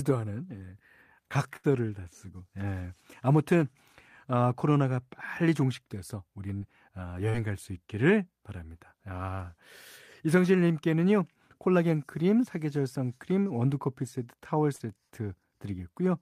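At 1.56 s a burst of packet loss removes about 80 ms of the speech stream. The receiver covers roughly 70 ms of that gap by extending the last sound it decoded and fading it down, so the speech briefly freezes into a sustained, decaying tail before cutting back in. The speech resumes slightly further on, with the intervening 80 ms of material simply gone.

Short concealed packet loss follows at 6.58 s, 7.30 s and 14.76 s, each time about 40 ms of audio arriving too late for the decoder. Concealment extrapolates the preceding signal for 35 to 45 ms, then cross-fades into the real audio. Each event is heard as a brief smear or flutter rather than a clear dropout, and any short sound in those windows can be swallowed.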